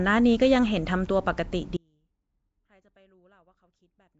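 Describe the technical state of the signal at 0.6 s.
At 0.6 s the speech carries the rough, hissy halo and smeared, underwater blur heard across the whole clip. Nothing reaches above 7.7 kHz. The likely cause is Nellymoser compression, with starved bands refilled by noise, fitting a rate near 32 kbps.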